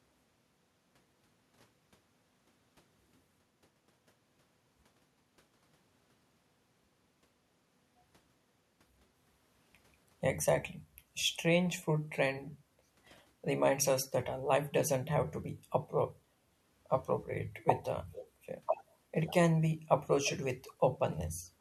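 Echo leak, from 20.25 to 20.31 s: a brief, faint copy of the speech returns about 351 ms behind the original, roughly 15 dB down. The likely cause is a far-end loudspeaker whose echo canceller let some of its microphone pickup pass back.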